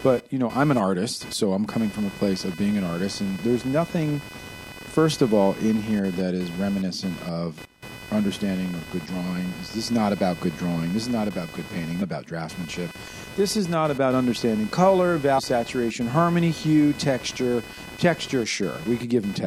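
A speech recording carries computer activity noise throughout, a buzzing, chirping layer pulsing at around 500 Hz and sitting roughly 15 dB below the voice. It comes from processor, graphics or mouse load currents disturbing the ground the audio circuit shares with the computer. Unlike mains hum, which is a steady 50 or 60 Hz tone with harmonics, this noise follows what the machine is doing rather than the speech, so its texture shifts and scratches instead of holding one pitch.

There are also two short blips from damaged data in a compressed stream. The first runs from 12.01 to 12.03 s, between "not about good painting" and "about draftsmanship". The second runs from 15.37 to 15.40 s, between "not about understanding color" and "saturation harmony hue texture". At each point the decoder hit corrupted frames, lost sync and had to hunt for the next valid header. The result is a brief chirp or squawk lasting about 20 ms. 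An analogue click would be a single sharp tick, but these are more like a glitch in a digital file than a spike in the signal.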